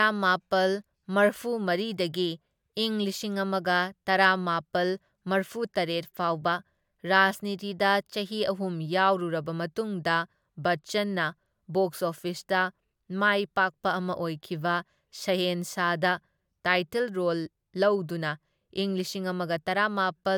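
No technical faults are audible.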